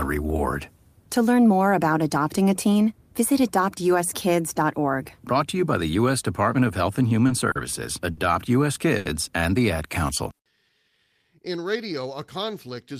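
Starting at 7.27 s there are four short stalls from late packets, at 7.27, 7.51, 8.11 and 8.97 s, the last right before "and the". Each time the jitter buffer ran dry and the receiver held the last sound for 20, 40, 60 and then 80 ms, so sounds hang on with a faint buzz or dip.

From 10.33 to 11.36 s there's a jitter buffer slow-down. The receiver repeated pitch periods or bits of pauses to rebuild its reserve, adding about 109 ms, so the audio runs at 90% speed with the same pitch, drawn out.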